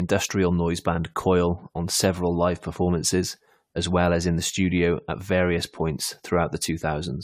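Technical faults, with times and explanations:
Throughout, generation loss: the speech sounds swirly, hollow and smeared, consonant attacks blur, and nothing reaches above 18.5 kHz. This is likely from around seven rounds of lossy encoding, consistent with AAC-LC at 96 kbit/s, each pass adding new quantisation noise and spectral holes.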